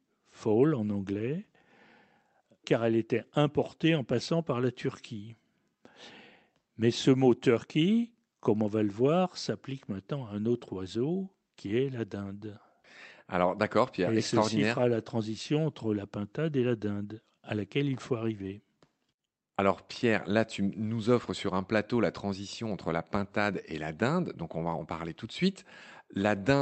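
It's a speech recording carried over a WebRTC call path, with the top end stopping at about 8 kHz as a call codec does, and there's nothing technically wrong to flag in it.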